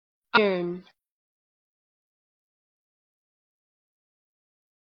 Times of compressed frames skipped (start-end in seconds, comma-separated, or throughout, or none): 0.33-0.38